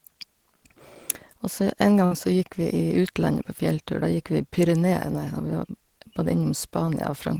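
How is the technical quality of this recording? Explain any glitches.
The recording has one glitch, a burst of packet loss from 2.05 to 2.14 s. Consecutive packets were lost or arrived too late to play, so the receiver stretched the preceding sound for about 56 ms while fading it. Speech then resumes with roughly 60 ms missing.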